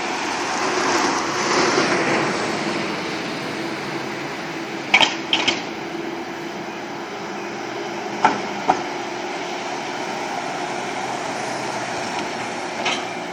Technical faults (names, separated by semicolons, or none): USB whine